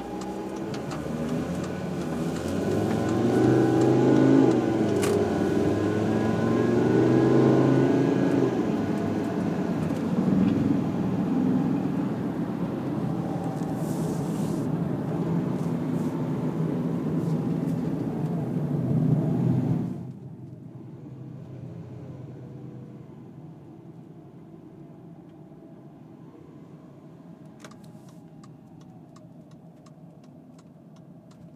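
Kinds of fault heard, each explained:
The everyday sounds here carry no audible technical fault.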